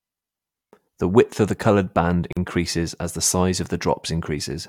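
At 2.33 s, between "of the coloured band" and "as the size of", the speech stops dead for about 42 ms, ending at 2.37 s. This is a gap at a join of encoded pieces: separately encoded segments were butted together without trimming the encoder's start-up delay and final-frame padding, so that silence remains. Both edges are smeared by the codec, and the speech resumes exactly where it broke off. Joins recur every 6.0 s, so only this one falls within the clip.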